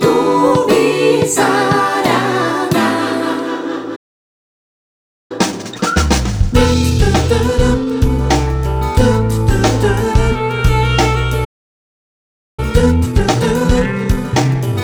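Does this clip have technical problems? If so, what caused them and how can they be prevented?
Yes. A playback stall cuts the sound off mid-flow twice, into silence from 3.95 to 5.32 s (about 1.34 s) and from 11.44 to 12.60 s (about 1.13 s). The likely cause is the player running out of buffered data or its thread being blocked until it recovered. A larger playback buffer and keeping the audio thread free of blocking work would prevent these gaps.

Right after each gap comes time-compressed catch-up. From 5.32 to 8.32 s the audio runs about 1.15 times fast, and from 12.60 s to the end about 1.25 times fast. The pitch stays normal, because the player trims its backlog by cutting out small pieces and cross-fading across the joins. Avoiding the stalls removes the need for catch-up, and a gentler maximum speed-up rate would make any remaining catch-up less noticeable.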